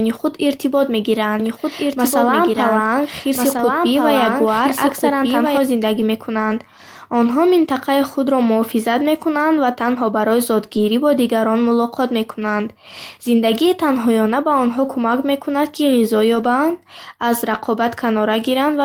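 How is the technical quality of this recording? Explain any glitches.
The recording has two kinds of fault: a stretch where the speech is doubled, and several brief rough patches where lost audio was rebuilt.

Doubled audio track: From 1.40 s to 5.58 s, just after "худ иртибот", a second full-band copy of the speech runs about 1.5 s behind the original and about 5 dB quieter. It has no reverberant tail and cuts in and out abruptly, likely because a slower second capture path was mixed in.

Lost packet rebuilt from error correction: At 3.57–3.59 s, 6.49–6.51 s, 10.75–10.77 s (between "мекунанд ва танҳо барои" and "бо дигарон мулоқот мекунанд"), 16.35–16.45 s (after "кӯмак мекунад ки ғизо") and 17.53–17.67 s, the audio turns briefly grainy and noisy. There are no gaps, because the decoder filled each loss with a low-bitrate copy carried in the following packet. The affected spans last 20 ms, 60 ms and 80 ms.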